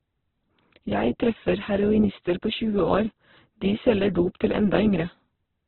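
From start to end the speech is heavily damaged, rough and grainy, with nothing above about 4.1 kHz, which fits a very low bitrate near 8 kbps. This is likely Opus compression in narrowband CELT mode filling starved bands with folded or noisy energy. A spectrogram shows a hard ceiling and smeared, speckled harmonics.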